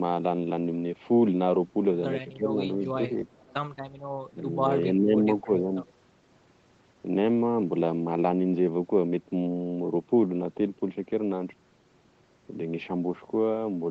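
A speech clip in which the talker's level dips sharply in short patches at 2.37–2.6 s, 4.31–4.64 s, 4.94–5.26 s and 5.42–5.7 s, falling by roughly 10 to 15 dB. These are likely speech suppressed in double talk: with both sides talking at once, the echo canceller mistook this voice for loudspeaker echo and turned it down. From 3.27 to 3.54 s a faint delayed copy of the voice trails about 330 ms behind, some 30 dB below the speech. This is likely an echo leak, where a far-end loudspeaker's sound slipped past its canceller and was sent back.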